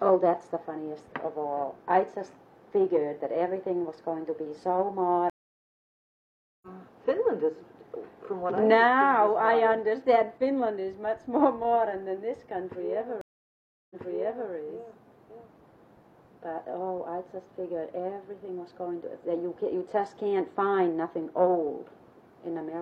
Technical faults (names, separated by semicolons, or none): stream reconnect